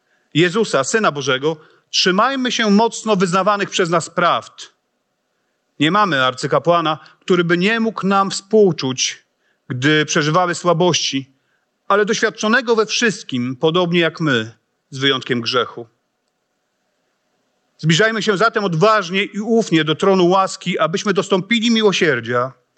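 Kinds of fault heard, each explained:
Gain pumping: throughout the speech, the gain swings by around 10 dB, pulled down under each loud syllable, likely from excessive input gain driving a fast limiter. The waveform looks evenly dense.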